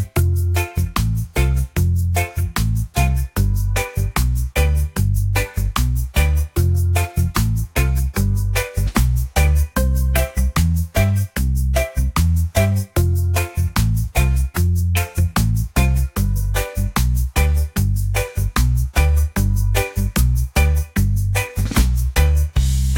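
No technical faults can be heard anywhere in this recording.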